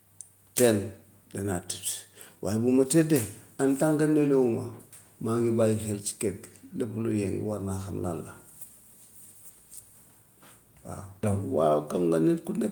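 Listening to the speech in the clip, nothing stood out as a technical problem.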